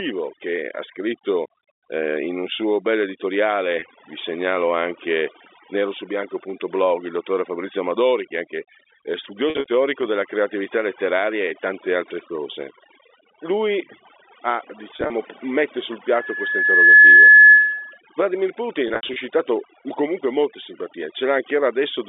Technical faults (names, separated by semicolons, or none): overdone noise removal; packet loss with pitch repetition; loudspeaker feedback squeal